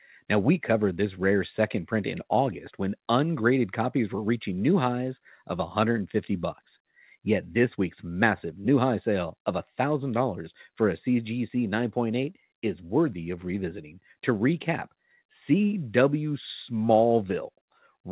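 No technical faults can be heard in this recording.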